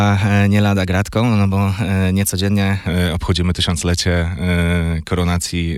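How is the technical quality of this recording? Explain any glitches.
The recording has one fault. From 0.0 to 2.87 s there is a wrong sample rate: the sound runs about 1.09 times fast and sits roughly 1.5 semitones high, which fits 44.1 kHz material played back at 48 kHz without conversion. Unlike a pitch shift, tempo and pitch rise together.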